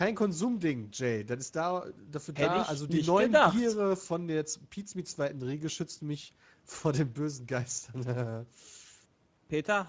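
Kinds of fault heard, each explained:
Speex codec: low-bit CELP coding, near 16.8 kbps, makes the speech plainly hoarse and noisy; spectrogram shows smeared harmonics and nothing above 8 kHz.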